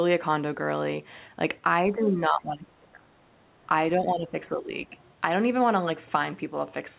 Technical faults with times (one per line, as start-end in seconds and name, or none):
1.82-3.38 speech suppressed in double talk
4.00-4.96 speech suppressed in double talk